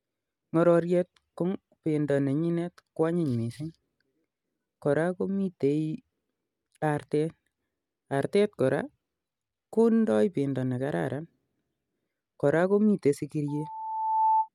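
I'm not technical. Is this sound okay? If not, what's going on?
No. From 13.48 to 14.49 seconds there is loudspeaker feedback squeal. A microphone is picking up its own loudspeaker. One tone, at 882 Hz, keeps feeding itself. It swells over most of a second into a squeal louder than the speech.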